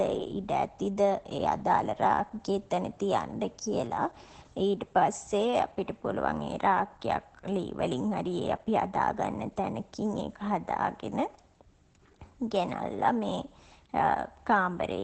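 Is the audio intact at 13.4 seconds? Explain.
No. At 13.4 s, as throughout the clip, the speech carries Opus voice compression in SILK mode. Nothing is heard above 8.5 kHz, and coarse linear-prediction coding of the excitation leaves the voice muffled, hoarse and slightly robotic, which fits a bitrate near 12 kbps.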